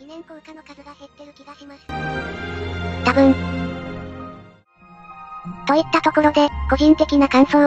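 One channel inverted, 0.0 to 1.89 s: the sound falls about 26 dB, likely from reversed polarity cancelling shared content when summed to mono.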